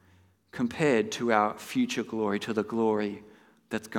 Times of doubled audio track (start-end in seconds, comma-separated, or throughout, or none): none